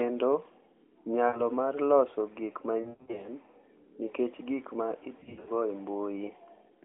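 Lost AMR speech frames occur at 1.28–1.41 s, just before "mar loso gik", then 2.82–3.29 s after "mar loso gik" (gaps up to 100 ms), and 5.20–5.51 s after "nikech gik ma" (gaps up to 80 ms). Failed frames make the decoder repeat stale pitch and vocal-tract settings at falling gain, giving smeared, warbling dropouts. On a spectrogram, harmonics stretch flat and fade. The waveform envelope sags in these patches.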